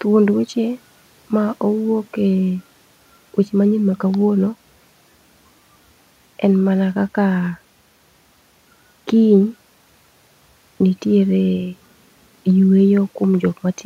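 Nothing here trips any alarms; there's no technical fault to point to anywhere in this speech recording.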